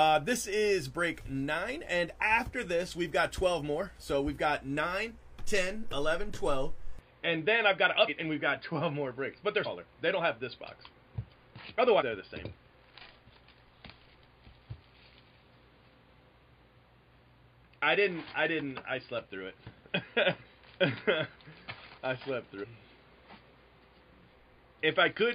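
At 6.99 s the recording most likely switched its input to a poorer device, and that device carries on to the end. Nothing above 4.8 kHz gets through from that point, so the sound abruptly turns dull and boxy. There is no gap at the change and the level holds steady, but a new background noise floor appears, sitting roughly 35 dB below the signal.

Compressed frames were then skipped five times, at 8.04, 9.62, 11.97, 20.42 and 22.59 s. At each point a run of encoded frames never reached playback, so the audio jumps forward. The first three jumps lose about 150 ms and the last two about 300 ms, which fits whole frames of roughly 43 ms.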